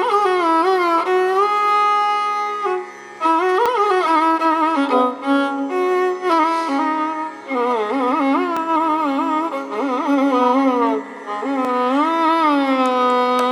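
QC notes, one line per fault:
3.66 s, 8.57 s and 11.65 s: dropped buffer (overrun). Each is a short jump where the sound skips forward with no gap of silence. The first two skip only a few milliseconds, and the one at 11.65 s skips three times as much, around 15 ms. The likely cause is capture samples being overwritten before the software collected them, so a slice of audio vanishes and the surrounding material is butted together.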